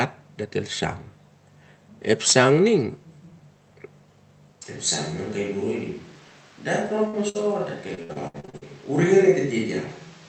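At 2.27 to 2.33 s a harsh, crackling edge lands on a loud peak. The likely cause is microphone overload: the input drives about 8 dB past the converter's limit and the tops of the waveform are cut off.

From 4.62 s to the end, the speech abruptly turns roomy, hollow and thin in the bass, drops about 5 dB, and gains audible background noise. This fits a switch to a distant microphone, with the close microphone's signal lost.

At 7.07 s and again at 7.29 s, a short burst of packet loss leaves a held buzz or fading hiss lasting about 55 ms. Speech then resumes with roughly 60 ms skipped each time, because those packets were lost and the receiver could only stretch the last sound over the gap.

From 7.95 to 8.63 s, repeated packet loss gives a choppy sound. Eight gaps arrive in quick succession, the longest 67 ms. Nearly half of that stretch is patched-over guesswork, and about 300 ms of speech is missing. 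Throughout, the call codec's bandwidth stops at 8 kHz.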